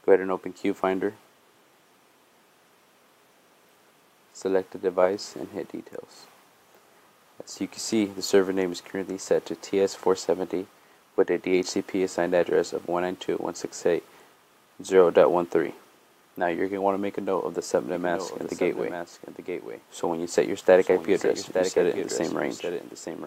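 From 17.94 s to the end, a doubled audio track appears: an abrupt, dry copy about one second late, around 10 dB quieter. Likely cause: a slower second capture path or misaligned edit.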